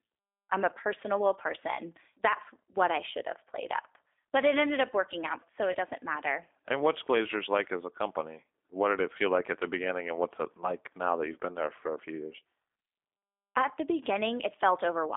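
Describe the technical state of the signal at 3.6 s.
At 3.6 s the speech carries G.729 codec damage, present throughout the clip rather than at this moment alone. The coder rebuilds each 10 ms frame from a vocal tract filter, a pitch predictor and a few pulses, so the sound is plainly rough and synthetic, which fits an 8 kbit/s coder. A spectrogram shows energy confined to roughly 250 Hz to 3.6 kHz, with nothing above, and smeared, grainy harmonics.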